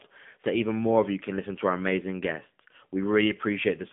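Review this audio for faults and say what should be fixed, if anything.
AMR narrowband mobile codec damage runs throughout the speech: nothing passes above 3.6 kHz, the line band sits near 150 Hz to 3.5 kHz, and the voice is plainly buzzy and synthetic, which fits a low AMR-NB mode around 7.4 kbps rebuilding the vocal tract from sparse pulses. To prevent it, capture or route the speech over a wideband path instead of a narrowband mobile call.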